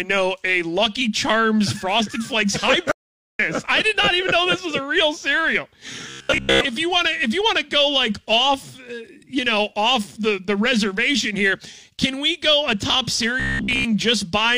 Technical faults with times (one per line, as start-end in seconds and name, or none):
2.92-3.39 audio dropout to silence
6.10-6.61 robotic sound from repeated short buffers
13.40-13.85 robotic sound from repeated short buffers